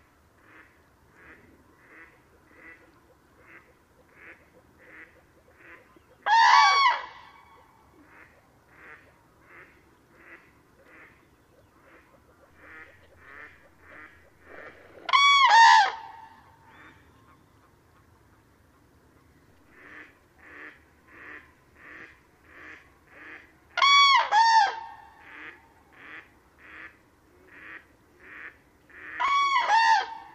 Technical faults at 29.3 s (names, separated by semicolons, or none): repeated buffer